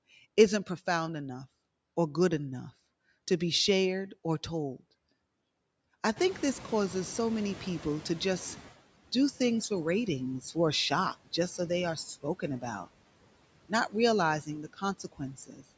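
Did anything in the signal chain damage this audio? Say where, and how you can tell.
Yes, and it's all in the call processing stage. Noise suppressor artifacts run through the whole clip: the background gets pulled down by about 17 dB frame by frame, so it dips between phrases and swells back under the speech.

Around 6 s the room noise jumps up by about 18 dB, and the noise suppressor is caught catching up. From 6.16 to 8.73 s the louder background leaks through, then sinks by about 12 dB over roughly 2.6 s as its noise estimate adapts.

Near the end, from 14.98 to 15.64 s, there's speech cut by the noise suppressor. It misreads parts of the speech as noise and drops them as much as about 16 dB, so around a third of a second of speech sounds swallowed and faint.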